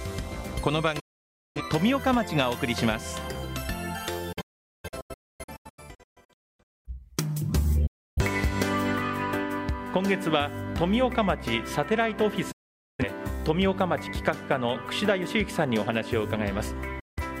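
You get five digital broadcast dropouts, at 1.0, 4.3, 7.9, 12.5 and 17.0 s: the receiver loses signal or gets bad frames, then mutes with an 8 ms fade. From 4.3 to 6.9 s it's several short holes, longest about 0.43 s. Whatever aired there is gone.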